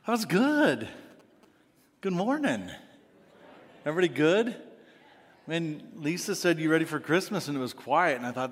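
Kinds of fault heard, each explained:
GSM signalling bursts: A nearby 2G phone is sending short radio bursts, and the audio circuit rectifies them into sound. From 0.64 to 1.45 s a galloping dit-dit-dit of short buzzes at about 217 Hz is heard. It sits roughly 30 dB below the signal.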